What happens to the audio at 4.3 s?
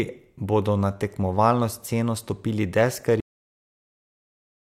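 Cut-off end: from 3.20 s to the end of the clip, the audio is gone, so 4.3 s falls inside a stretch of digital silence. The speech stops abruptly right after "na tekmovalno sceno stopili", mid-sound, because the final buffers of the recording were never written or played out. There is no decay or fade; the signal simply drops to silence and stays there for the remaining second and a half.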